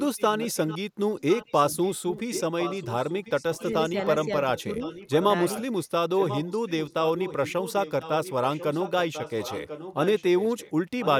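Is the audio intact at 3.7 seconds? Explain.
No, not quite. From 1.19 to 4.25 s there's an echo leak: a copy of the speech comes back about 1.04 s late, roughly 10 dB down, most likely because the far end's loudspeaker sound got past its echo canceller and was sent back.

Right around that moment, between 3.6 and 3.95 s, there's also speech suppressed in double talk. The talker dips by a few dB in short bits, adding up to only about a twentieth of a second, likely because the canceller couldn't separate the talker from the echo and turned both down.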